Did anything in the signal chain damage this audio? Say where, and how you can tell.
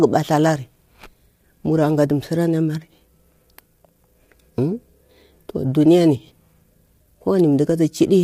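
Yes, at the codec. Throughout, the speech is rough and grainy, with nothing above 15.6 kHz. Likely low-delay AAC compression, fitting AAC-ELD near 32 kbps.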